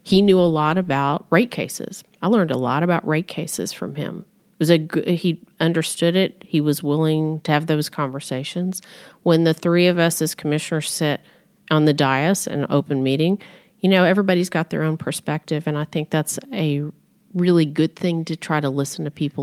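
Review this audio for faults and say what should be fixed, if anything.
No faults turn up in this speech recording, so nothing needs to be fixed.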